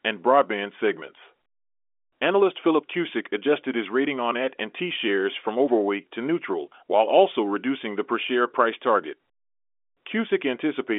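No technical faults can be heard in the speech. It arrives through a working G.711 telephone coding path, so the sound is held to the 300 Hz to 3.5 kHz line band with nothing above 3.7 kHz, and any coding damage is faint at most.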